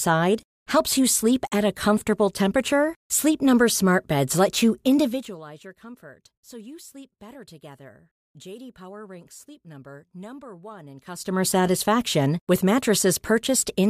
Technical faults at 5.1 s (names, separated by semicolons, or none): zipper noise